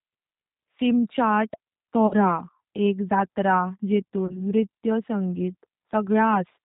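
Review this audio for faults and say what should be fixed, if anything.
G.729 codec damage runs throughout: a spectrogram shows a hard ceiling at 4 kHz, and the speech sounds rough and synthetic in a way that fits the 8 kbit/s G.729A pulse-coded rebuild.

VoIP packet loss concealed by the speech codec occurs at 2.07–2.15 s and again at 4.27–4.42 s, just before "नृत्य संगीतर". At each point the decoder extrapolates from its last pitch and filter while lowering the gain, so the sound fades. On the waveform this shows as a decaying envelope. The gaps fit about 40 ms and 20 ms of missing packets.

To prevent both, use a wideband codec at a higher bitrate and add forward error correction and a larger jitter buffer so packets aren't lost.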